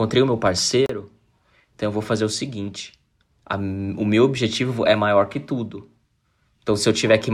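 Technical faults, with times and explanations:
0.86–0.90 s, Bluetooth stall: the speech cuts to silence for 33 ms, then resumes. Interference likely held up packets, so the headphone buffer ran dry.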